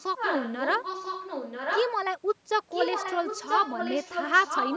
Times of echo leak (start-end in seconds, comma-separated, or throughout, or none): 0.00-1.93, 2.70-4.76